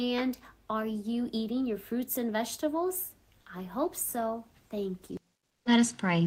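For about 180 ms, from 5.47 to 5.65 s, near the end of the audio, the background drops out and is replaced by a smooth, featureless hiss about 7 dB quieter than the real ambience around it, which sits about 47 dB below the loudest parts. This is comfort noise in place of the background, likely from discontinuous transmission such as Opus DTX: the sender stopped sending during the pause, and the receiver filled the gap with synthetic noise that only roughly matches the original background.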